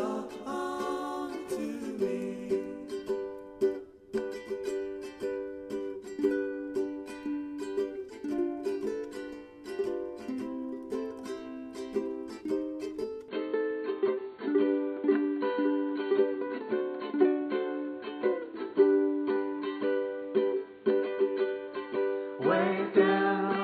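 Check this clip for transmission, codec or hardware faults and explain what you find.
One fault: from 13.28 s to the end, the sound drops abruptly to a narrower, duller band with nothing above 4.4 kHz, a level shift of around 5 dB, and a new background noise sitting roughly 35 dB under the signal. This is most likely an input switched to a poorer device, the capture moving to a lesser microphone or headset link. It differs from a codec bandwidth cut because the level and noise floor change too, and there is no silence at the switch.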